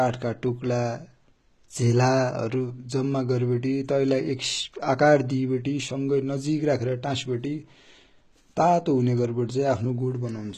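HE-AAC compression runs through the whole clip: nothing sounds above 14.9 kHz, and the treble is likely rebuilt by spectral band replication from copied lower bands, which fits a low bitrate near 20 kbps. The result is plainly audible: s sounds come out gritty, metallic or lispy.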